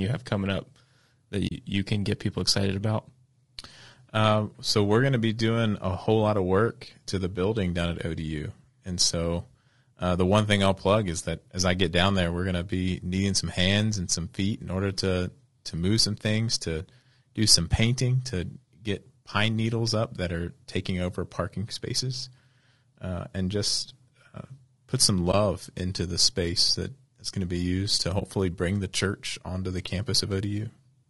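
The speech is most likely carried through low-delay AAC compression at a low bitrate, consistent with AAC-ELD near 32 kbps. Its short transform frames resolve the pitch harmonics poorly, so the voice sounds plainly rough and grainy throughout, with noise filling between harmonics and a thin, synthetic top band.

AAC frame loss with muting occurs at 1.47 to 1.52 s (40 ms), 25.31 to 25.34 s and 28.19 to 28.23 s (20 ms each). The decoder zeroes the missing spectrum, and the overlapping windows fade the sound out and back in, leaving brief soft-edged gaps.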